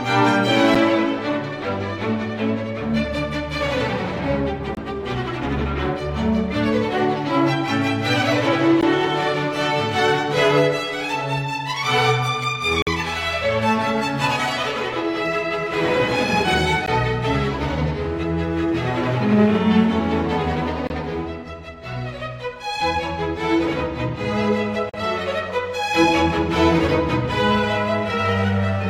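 Short hard-edged dropouts recur at 0.75 s, 4.75–4.77 s, 8.81 s, 12.82–12.87 s, 16.86 s, 20.87–20.90 s and 24.90–24.94 s, spaced about every 4 s. This is a gap between stream segments: the timestamps of consecutive 4 s segments do not meet, and the player pads the missing span with silence. The holes run from roughly 8 to 48 ms, abruptly cutting the sound out and back in, while nothing of the audio itself is lost.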